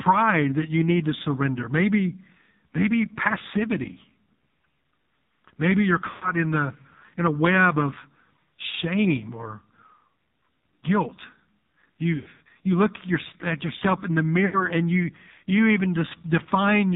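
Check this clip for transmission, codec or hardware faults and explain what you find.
Two faults are present: heavy narrowband mobile codec damage across the whole clip, and three bursts of lost speech frames.

AMR narrowband mobile codec, throughout: The speech was squeezed through AMR-NB at a very low rate, which fits the 5.9 kbps mode. Sampling at 8 kHz removes everything above 4 kHz. With so few bits, the vocal tract model and its sparse pulse excitation are only roughly coded. The result is muffled, buzzy and distinctly synthetic speech, with the heavy texture of a poor mobile call.

Lost AMR speech frames, at 6.10 to 6.32 s, 12.16 to 12.41 s and 14.46 to 14.68 s: Radio errors corrupted whole frames, and the decoder discarded them. In their place it repeated the last good pitch and vocal tract settings while lowering the gain. At 6.10 s about 120 ms goes missing, so the sound smears and fades before it recovers roughly. 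The 12.16 s burst spreads about 180 ms of losses over 240 ms, with a longest gap of 100 ms, which gives a stuttering warble. At 14.46 s about 80 ms gives a shorter dip.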